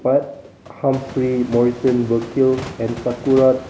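No technical faults are audible.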